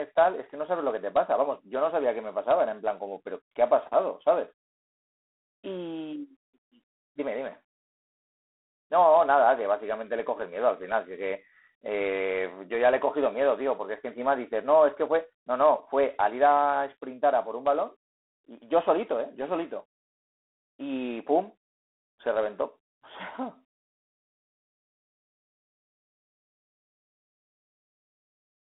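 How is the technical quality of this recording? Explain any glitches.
Quality's pretty rough: the whole thing sounds like it went through a low-rate G.726 ADPCM link. That fault runs for the full clip. G.726 doesn't send the signal itself, just a few bits per sample describing how far it strays from an adaptive prediction. Here the grit points to the 24 kbit/s mode, so each step is coarse and you get a harsh, rasping hiss that rises and falls with the speech level. The band is telephone-narrow, roughly 300 Hz to 3.5 kHz, with nothing above 3.9 kHz.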